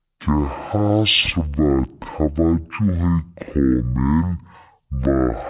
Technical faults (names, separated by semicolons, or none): wrong sample rate